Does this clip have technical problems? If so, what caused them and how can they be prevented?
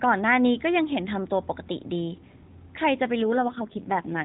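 Yes. From about 3.22 s to the end at 4.24 s there's an AMR rate drop. The band doesn't narrow and nothing cuts out, but the speech goes rougher and buzzier, which fits the AMR-NB codec stepping down from its 12.2 kbps mode to around 4.75 kbps. On a weak radio link the network shifts bits from the speech itself to error protection, so the vocal-tract model gets fewer pulses per frame and sounds more synthetic. Before that the narrowband phone sound has only light codec damage. To prevent it, record where the signal is strong or use a wideband or higher-rate path so the codec isn't pushed into a low mode.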